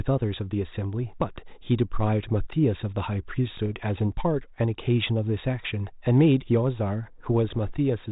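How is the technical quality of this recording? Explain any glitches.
The speech carries two short glitches over a telephone-band G.726 ADPCM path at 32 kbit/s, which sounds cut off above 4 kHz.

Bit errors on an ADPCM link, at 3.51–3.69 s and 7.49–7.67 s: flipped bits derail the decoder's adaptive step size and predictor, giving pops and rough bursts, unlike the clean gaps of packet loss.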